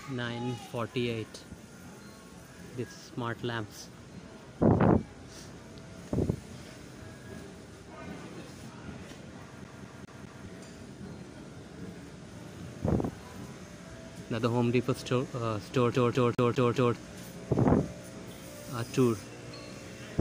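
From 9.64 to 10.46 s the audio falls into a CD stuck on one turn: a scratch knocks the laser back one track each revolution, so the same 0.20 s slice plays four times, with a brief mute at every jump. The identical fault returns from 15.94 to 16.96 s, this time five repeats of a 0.20 s slice. Both produce the rapid, evenly spaced stutter of a skipping disc.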